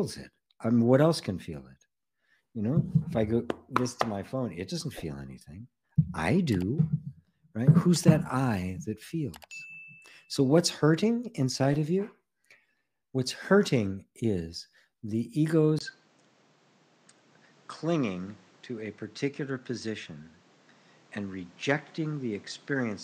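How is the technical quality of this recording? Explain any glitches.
One glitch is audible, and it lasts through the end of the recording. At 15.79 s a short gap of about 20 ms is followed by a change in character: the top end stops near 8.6 kHz, the level falls by roughly 5 dB, and a new noise floor appears about 30 dB below the signal. This is likely an input switched to a poorer device, where a narrower-band microphone or headset path took over mid-recording. The result is a duller, boxier sound with its own background noise.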